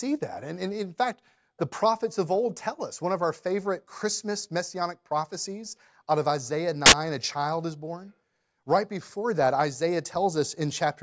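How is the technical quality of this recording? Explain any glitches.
The recording has one glitch, a burst of file tags played as audio. From 6.86 to 6.92 s, about 60 ms, the speech is replaced by very loud white noise with abrupt edges. A block of embedded picture data, compressed and therefore statistically random, was decoded as if it were samples. What separates it from a codec dropout or clipping is its flat, very loud hiss with no trace of the underlying speech, starting and stopping instantly.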